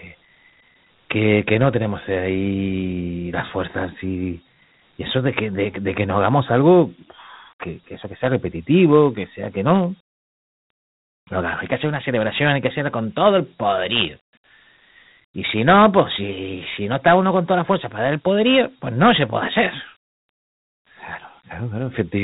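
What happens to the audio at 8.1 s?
At 8.1 s the speech carries the Dialogic VOX ADPCM damage present across the whole clip: 4-bit adaptive coding, which fits 8,000 samples a second, leaves nothing above 3.8 kHz and adds a gritty hiss that rises and falls with the speech rather than a steady noise floor.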